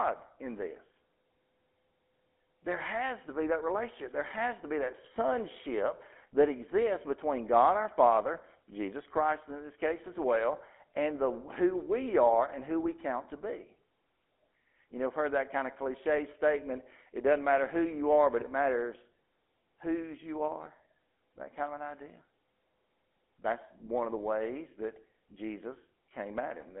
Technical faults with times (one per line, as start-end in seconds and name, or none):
0.00-26.80 GSM full-rate codec